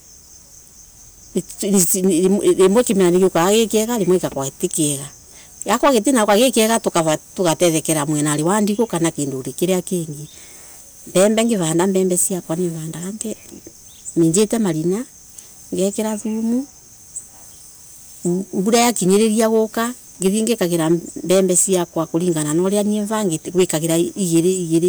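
Hard clipping runs through the whole speech clip, with the signal driven about 10 dB past what the chain could pass. A small share of samples, around one or two percent, get flattened, so speech peaks crackle harshly. Waveforms show squared-off tops; spectrograms show bright vertical smears of high harmonics.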